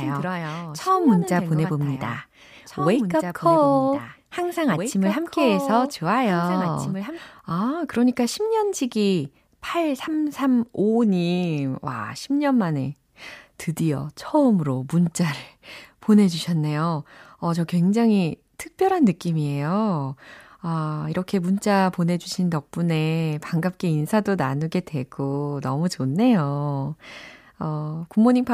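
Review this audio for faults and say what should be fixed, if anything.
A doubled audio track is already present at the start and runs to 7.18 s. A full-band copy trails about two seconds behind, roughly 10 dB quieter, and stops abruptly. The likely cause is the speech being captured twice, once through a slower second path. To prevent it, monitor only one capture path during recording.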